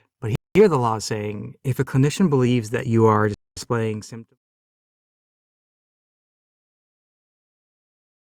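A speech recording with two kinds of fault. The sound drops to silence twice, from 0.35 to 0.55 s and from 3.34 to 3.57 s, gaps of about 0.2 s each. This is a Bluetooth stall. The likely cause is radio interference delaying packets, so the headphones' buffer ran dry and paused until resent data arrived. At 2.78 s the whole level, voice and background together, jumps up by about 4 dB in one step. That is the microphone volume stepping up. The call software judged the input too quiet and raised the device gain at once. The jump is abrupt rather than gradual. The clip ends with a smooth fade-out, beginning around 3 s and finishing at 4.38 s, so the second gap falls inside the fade.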